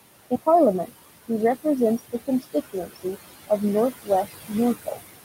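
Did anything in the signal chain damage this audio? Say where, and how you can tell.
Yes. The damage is in call processing, where a noise suppressor pulls the background down by about 18 dB. That room noise, sitting about 11 dB under the speech, sinks between phrases and swells back beneath them. On a spectrogram the floor pulses and breaks into flickering specks, the usual noise suppressor artifacts.

The same stage produces speech cut by the noise suppressor at 1.99 to 2.55, 2.73 to 3.17, 3.92 to 4.31 and 4.85 to 4.98 s. Weak speech was classed as noise and dropped by about 13 to 19 dB for roughly 0.1 to 0.15 s each time, showing as sudden notches in the waveform envelope.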